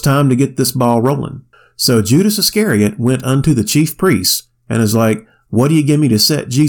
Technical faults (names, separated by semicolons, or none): hard clipping